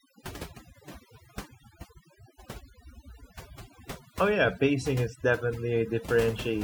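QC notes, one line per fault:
Throughout: overdone noise removal. The noise reduction was pushed too hard, so any frequency band sitting near the estimated noise floor gets clamped down or switched off. Quieter parts of the speech go with it, leaving a lowered background full of twinkling specks.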